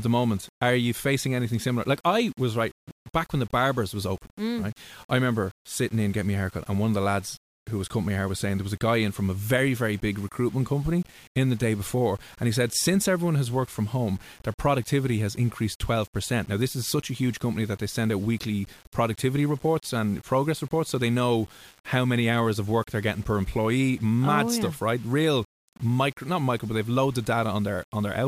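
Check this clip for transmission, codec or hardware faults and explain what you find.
One fault runs through the whole recording: low bit depth without dither. The speech carries a grainy, rasping edge that rises and falls with the speech itself, with error sitting roughly 30 dB below the signal. The sound fits samples likely rounded to about 7 bits with no dither, so the error tracks the waveform. Quiet decays and pauses turn to gritty sputter or drop abruptly to silence. Dithered or hiss-like noise would stay steady even when the speech stops.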